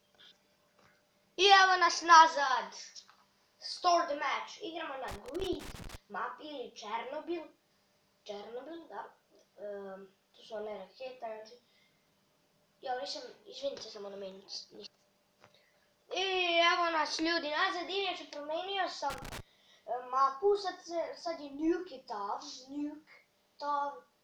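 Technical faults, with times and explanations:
5.08–5.96 s and 19.10–19.40 s, loose connector crackle: two irregular bursts of crackling, lasting just under a second and about 0.3 s, as a worn or dirty contact rapidly makes and breaks. Each break chops the signal into fragments, heard as scratchy, uneven crackle.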